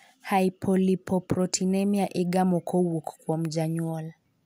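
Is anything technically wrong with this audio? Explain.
Yes. At 3.33 s the speech carries a single sharp click consistent with dropped samples. The likely cause is that a couple of samples, a tiny fraction of a millisecond, went missing from the stream, so the waveform steps abruptly from one value to a later one instead of moving smoothly. The gap is far too brief to remove any audible sound. What remains is that discontinuity, heard as one isolated tick and seen as a thin vertical line across the spectrum.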